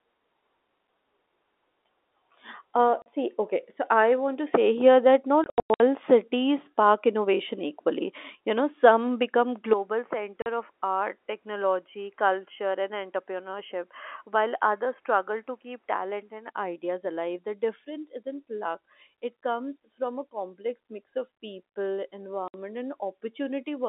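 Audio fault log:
3.02 s, 5.44 to 5.80 s, 10.42 s, 22.48 s: packet loss filled with silence. Sound drops out to dead silence with hard edges. The gaps last 40 ms, 260 ms, 40 ms and 60 ms. The 260 ms of loss is scattered across 360 ms, and its longest hole is 100 ms. Each gap is a multiple of 20 ms, which fits 20 ms packets. The receiver had nothing to play for the missing packets, so it played zeros.
9.73 to 16.48 s: input switched to a poorer device. The sound turns duller and about 10 dB quieter, with no gap at the change. The band now stops at 3.3 kHz, below the 3.7 kHz upper edge of the G.711 telephone line. A new noise floor sits about 40 dB under the signal. The likely cause is that capture moved to a weaker microphone or a headset call profile for this stretch, and then moved back.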